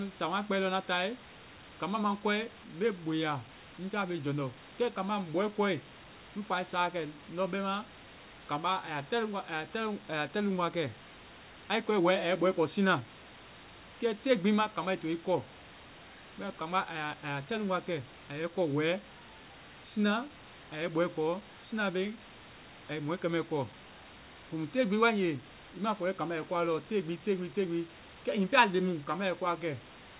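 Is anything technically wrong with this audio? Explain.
No, nothing technically wrong is audible in this clip.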